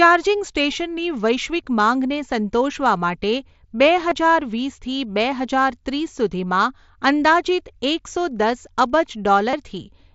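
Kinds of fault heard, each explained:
Concealed Bluetooth headset packet loss at 1.64 s, 4.10 s and 9.51 to 9.53 s: headset-to-phone packets dropped, and the receiver filled each gap (15 ms, 15 ms, then 22.5 ms) by repeating the best-matching recent stretch of waveform, leaving brief buzzy patches in the mSBC-carried speech.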